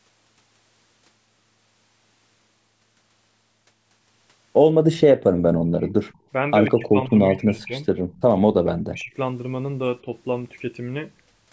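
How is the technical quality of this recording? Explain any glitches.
The speech is clear at the start, but the second half has two call-related faults. The speech keeps dropping in level, and faint echoes slip through. Nothing is heard above 8 kHz, which is normal for call microphone processing.

Speech suppressed in double talk occurs from 5.36 to 5.87 s, 6.68 to 7.81 s, 8.38 to 9.13 s, and briefly at 10.02 s. The voice dips, then recovers. The deepest cut, near 8.4 to 9.1 s, is around 40 dB and nearly silences it. The 10.02 s dip is slight. The likely cause is an echo canceller that hears both sides at once. It cannot tell the talker from the loudspeaker echo, so it lowers both.

Echo leak appears at 6.08 to 6.18 s, 7.60 to 7.67 s and 8.12 to 8.21 s. Each is a short scrap of the voice repeated 148 ms late. It sits far below the speech, around 35 to 40 dB down, so it is a faint ghost rather than a clear repeat. 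The likely cause is one side on speakerphone whose echo canceller missed part of what its microphone picked up. That residue was sent back down the call.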